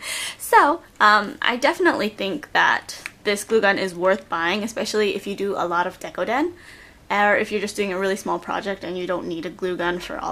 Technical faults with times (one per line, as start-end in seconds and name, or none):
none